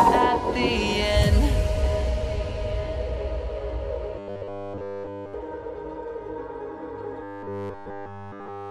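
From 4.19 to 5.34 s, and again from 7.23 s to the end, the sound turns into a rigid metallic buzz pitched at 100 Hz: robotic sound from repeated short buffers. The likely cause is fresh audio arriving too seldom, so all of each stretch is a roughly 10 ms slice looped in place of skipped material. The fixed 100 Hz pitch and the absence of gaps set it apart from plain dropouts or stutter.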